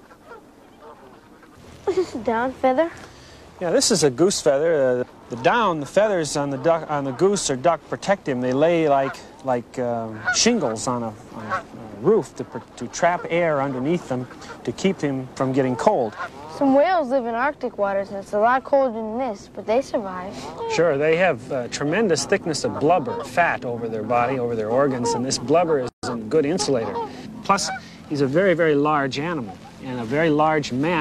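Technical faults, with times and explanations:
25.89 to 26.03 s, gap at a join of encoded pieces: the sound breaks off into a silence of about 143 ms, then resumes from exactly where it stopped. Two separately encoded pieces were joined without trimming, so the encoder's start-up delay on the second piece and the padding in the last frame of the first remain as dead air. The edges of the dropout are softened by the codec's smearing, so the fully silent part is shorter.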